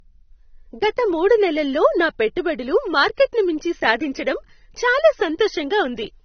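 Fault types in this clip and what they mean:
Low-bitrate audio saved at a high bitrate: the speech has nothing above 6.3 kHz and keeps a dull codec character, which fits a low-bitrate encode, likely around 27 kbit/s, later re-saved as a roomy MP3 that can't bring back what was already stripped out.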